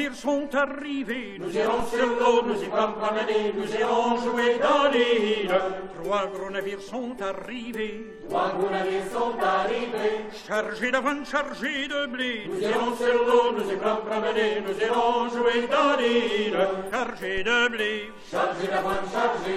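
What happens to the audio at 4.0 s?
Nothing goes wrong at 4.0 s; the audio plays through that moment intact, with no dropout, click or other fault.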